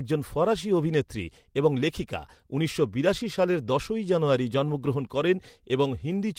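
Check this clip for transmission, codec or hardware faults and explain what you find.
No faults found in this clip.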